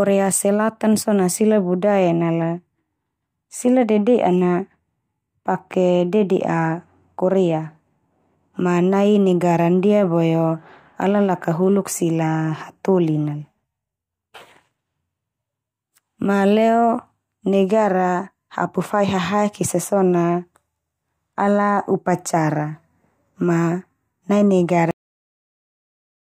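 At 24.91 s the clip has a cut-off end: the final stretch of audio was never written out or played, so the speech stops abruptly partway through a sound and falls straight to digital silence, with no natural decay, for the remaining 1.3 s.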